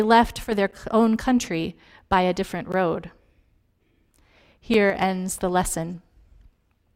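At 0.44 to 0.52 s, the speech sags abruptly by about 6 dB, which points to one channel dropping out, likely a stereo channel that went silent for a moment before the mono sum, halving everything both sides shared. At 0.71 s, just before "own country by a", a gap between stream segments appears: the timestamps of consecutive roughly 2 s segments failed to line up, leaving about 9 ms that the player filled with silence. It is heard as a hard-edged click of a hole. The same timing slip recurs at 2.72 s, right after "country by a different", where the gap is about 14 ms, and at 4.74 s, just before "ends the", where it is about 5 ms. The spacing of roughly 2 s between these gaps matches the segment boundaries, and no speech is lost, only delayed. At 4.90 to 4.95 s, another brief dip of about 6 dB likely comes from one channel dropping out again, heard as a short, abrupt drop in level.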